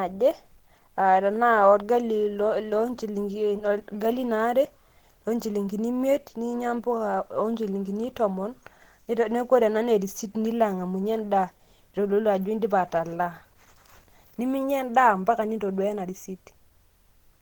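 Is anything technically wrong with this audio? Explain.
Yes. Throughout the speech, the sound points to Opus compression, likely at a low rate near 16 kbps in hybrid speech mode, leaving it muffled and hoarse, though extending to about 20.2 kHz.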